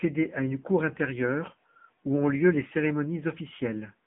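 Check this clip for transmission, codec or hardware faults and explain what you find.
The clip carries one fault for its whole length: AMR narrowband mobile codec coding. The speech sits in a telephone band of roughly 150 Hz to 3.6 kHz, with nothing above 3.8 kHz. The codec damage is plainly audible, with a buzzy, synthetic edge that fits one of AMR-NB's lower modes, near 8 kbps. AMR models the vocal tract and drives it with a few pulses every 5 ms, so the voice is rebuilt rather than passed through. That rebuilding, not the missing treble alone, is what separates it from a simple telephone-band filter.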